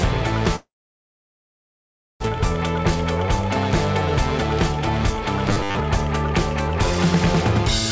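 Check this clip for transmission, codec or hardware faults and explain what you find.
Two transmission faults are audible, carried over a G.722 call path at 64 kbps.

Long network dropout, 0.56 to 2.26 s: likely a stalled network stream. The receiver stretches the last sound, which decays into near-silence, and about 1 s of audio never returns.

Robotic sound from repeated short buffers, 5.49 to 5.79 s: likely starved packet delivery. Most of this stretch is a repeated short slice, forcing a rigid 100 Hz buzz that fits a 10 ms buffer.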